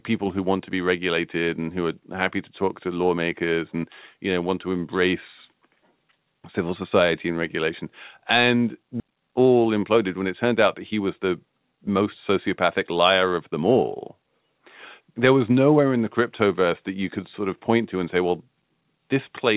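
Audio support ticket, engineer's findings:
Skip ahead at 9.0 s: speech jumps forward with no gap or fill. About a second of audio is lost and the two sides are butted together. Probable component is the jitter buffer, which discarded a stretch that had built up while later packets were already queued.

Jitter buffer speed-up, 9.06 to 12.02 s: speech runs about 10% fast at unchanged pitch and sounds hurried. The receiver trimmed short pitch-period pieces repeatedly, removing roughly 0.3 s to bring the excess delay back down. This is on the G.711 mu-law path, band-limited to 4 kHz.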